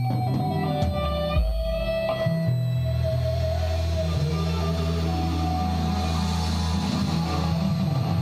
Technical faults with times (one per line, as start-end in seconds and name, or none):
0.00-8.21 switching supply whistle